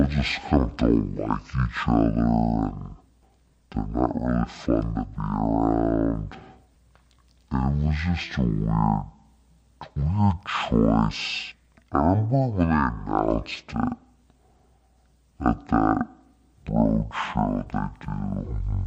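It's a speech recording, and the whole thing is a classic case of stereo read as mono. The left and right samples have been pulled in one after another as if they were a single channel, so the talking drags along at half speed and sits a full octave low, 12 semitones down. Listen closely and you'll also catch a fainter mirrored copy of the sound folded into the upper half of the spectrum.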